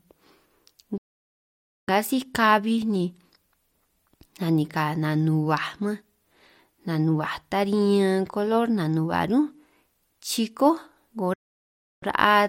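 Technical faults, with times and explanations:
0.98–1.88 s, playback stall: the player likely ran short of data or was blocked, so the speech cuts to silence for about 0.9 s before resuming.
11.34–12.03 s, playback stall: a second, likely interruption in data delivery drops the speech out for about 0.68 s, then it resumes.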